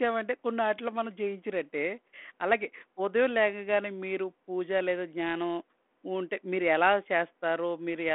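No technical faults can be heard in the speech, which comes through a G.726 ADPCM telephone path at 32 kbit/s limited to a 250 Hz to 3.4 kHz band, with only the light coding grain that rate leaves on the signal.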